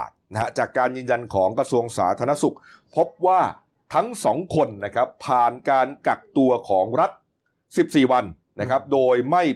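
Speech recording; no technical faults detected.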